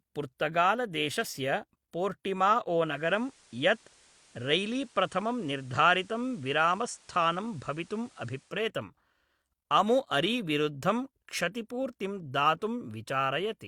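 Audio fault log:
2.73–8.70 s: digital radio blending to analogue. The receiver loses the digital stream and cross-fades over about 0.42 s to the station's FM broadcast. It crossfades back at the end. A steady hiss also rises to around 30 dB under the speech, the noise floor of the analogue path. The loudness holds steady across both blends.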